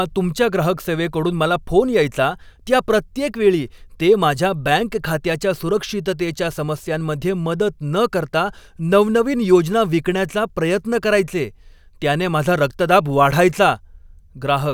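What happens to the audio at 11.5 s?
Nothing goes wrong at 11.5 s: the speech carries on intact there, with no audible fault at that moment.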